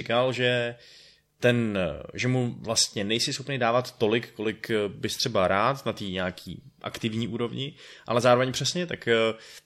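The speech recording carries no audible technical fault anywhere in the signal.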